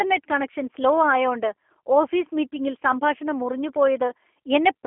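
G.729 coding runs through the whole speech clip, and its damage is plainly audible. The codec discards the waveform and resynthesises each 10 ms frame from a vocal tract filter, a pitch predictor and a handful of pulses, which fits the 8 kbit/s G.729A variant. The result sounds rough and slightly synthetic. The line band spans roughly 250 Hz to 3.4 kHz, and nothing survives above 3.6 kHz, so sibilants lose their crispness.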